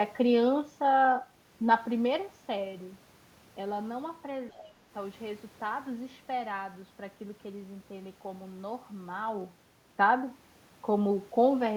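From 4.51 to 4.57 s, a brief scrap of the other side's voice leaking through can be heard. It sits about 35 dB below the speech. It is faint. The likely cause is an echo canceller that left a trace of the far-end loudspeaker in the microphone.

From 4.54 to 4.85 s, the speech is suppressed in double talk. The talker's level dips by up to about 20 dB. It is affected for about a third of a second. Both sides seem to overlap here. The echo canceller likely could not separate them and turned everything down.

From 9.12 to 9.56 s, zipper noise rides on the speech during a level change of about 10 dB. The gain moves in 2 dB steps, around fifteen times a second, with no smoothing. Each step clicks. Together they make a fast, gritty ticking.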